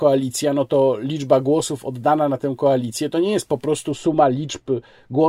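From 3.91 s, just after "nie jest po prostu", to the end of the clip, the speech turns dull and muffled because de-emphasis was applied wrongly. A treble-cut stage meant to reverse pre-emphasis acted on audio that did not need it, tilting the response smoothly downward so that 10 kHz sits about 14 dB below 1 kHz. Consonant detail and air are lost, and the voice sounds as if heard through a cloth.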